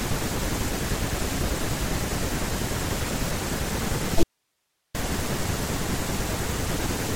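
An audio dropout to a faint residue runs from 4.23 to 4.95 s, taking out about 0.72 s of the speech. The signal cuts off abruptly mid-flow rather than pausing or fading, and in its place is only a low hiss, roughly 50 dB below the speech. The likely cause is a brief loss of the wanted signal upstream while the path after the break stayed live, so only its background noise came through until the speech snapped back in.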